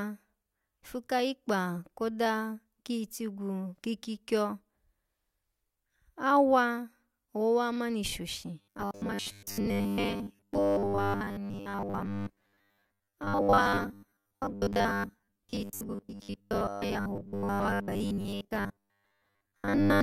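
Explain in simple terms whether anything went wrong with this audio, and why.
Starting at 8.59 s, just after "owowa ha mani shoshi", and lasting to the end of the clip, the speech takes on robotic sound from repeated short buffers. The likely cause is fresh audio arriving too slowly, so the software kept replaying its last tiny slice, about 10 ms long, while most of the real sound was skipped. That constant looping stamps a steady 100 Hz buzz onto the speech, making it metallic and mechanical.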